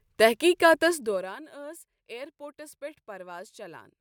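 From 0.87 to 1.37 s there's zipper noise: the speech level drops by roughly 20 dB in hard 1 dB steps, about 40 a second, with no smoothing between them. Each jump leaves a tiny click, so you hear a fast ticking buzz riding on the speech while it fades.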